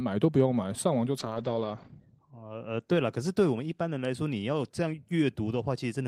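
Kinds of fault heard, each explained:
call bitrate drop: from 1.18 to 4.61 s the speech turns rough and muffled as the rate falls from 40 to 13 kbps, cutting highs above 8 kHz.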